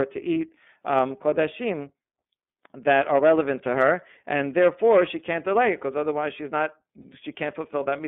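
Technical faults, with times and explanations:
throughout: iLBC codec, narrowband and plainly rough, slightly synthetic speech with nothing above about 3.5 kHz. The 30 ms frames and 13.33 kbps bitrate fit iLBC.
7.02–7.05 s: lost iLBC frame, a brief held, buzzy vowel-like sound lasting 30 ms where the decoder repeated the last pitch cycle, recovering immediately afterwards.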